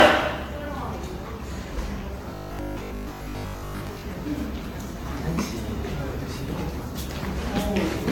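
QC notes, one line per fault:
Throughout: generation loss. The whole clip has a swirly, smeared, hollow character, with blurred attacks and no content above 17 kHz. This is more damage than a single pass at around 96 kbit/s would leave, and it fits AAC-LC encoding repeated perhaps five times. The likely cause is repeated decode-and-re-encode cycles. Each pass quantises again on a shifted frame grid, so noise and spectral holes build up.
2.35–4.03 s: robotic sound from repeated short buffers. The sound turns into a rigid, metallic buzz at 50 Hz that only loosely follows the underlying audio. A 50 Hz buzz fits a 20 ms chunk being replayed over and over. This most likely happens because fresh audio arrives too seldom, so playback repeats the last buffer to fill the gap. Most of this stretch is repeats, which means much of the real audio there is skipped.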